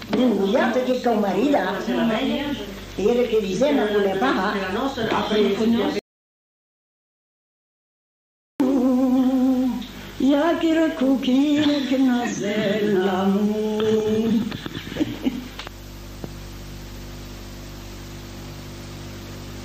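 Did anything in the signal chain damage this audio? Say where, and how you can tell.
Yes: an audio dropout to silence from 5.99 to 8.60 s, where the sound cuts to silence without room tone, likely from a lost input device or link.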